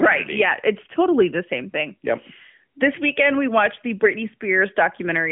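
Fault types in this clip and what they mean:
Nothing here counts as a fault; the speech just comes through the way a narrowband phone line normally carries it.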